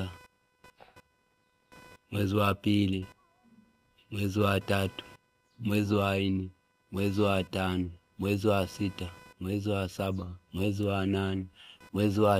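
Throughout the speech runs computer activity noise: a buzzing chirp pulsing around 500 times a second, roughly 30 dB below the voice, as machine load shifts the shared audio ground. A spectrogram shows harmonic stripes near 500 Hz spacing, independent of the speech.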